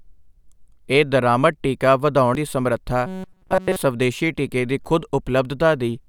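At 2.35 s, right after "ਇਹ ਦਰਾਮਦ ਟੀਕਾ" and before "ਦੀ ਸਮਰੱਥਾ", there's a tiny blip from damaged data in the compressed stream. Corrupt data made the decoder misread a frame and lose sync briefly. It happens again from 4.82 to 4.85 s, just after "ਟੀਕੇ ਦੀ", as a much longer glitch.

Between 3.06 and 3.76 s the speech goes to a rigid, metallic buzz at about 188 Hz. That's robotic sound from repeated short buffers, likely a roughly 5 ms chunk looped over essentially the whole stretch while fresh audio failed to arrive.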